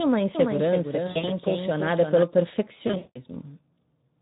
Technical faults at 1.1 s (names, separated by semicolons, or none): Speex codec; VoIP packet loss concealed by the speech codec